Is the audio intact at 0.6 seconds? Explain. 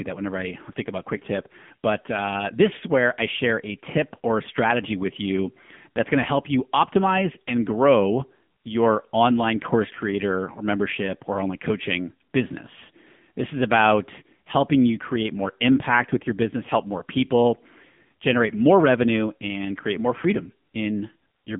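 No. At 0.6 seconds, as throughout the clip, the speech has passed through the AMR narrowband mobile codec. It rebuilds speech from a vocal-tract model fed by 2 to 10 pulses in each 5 ms, and the plainly audible damage points to one of its lower modes, around 8 kbps. The line band runs from about 150 Hz to 3.5 kHz, with nothing above 3.6 kHz, so the speech sounds thin, muffled and synthetic.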